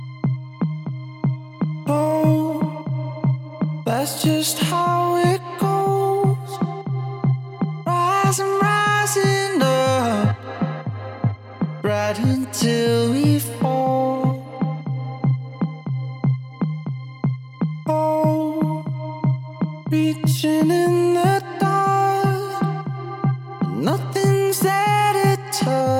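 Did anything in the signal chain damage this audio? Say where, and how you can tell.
No, nothing in the signal chain audibly damaged this audio, and the signal holds steady with no breaks, level jumps or added noise at any point.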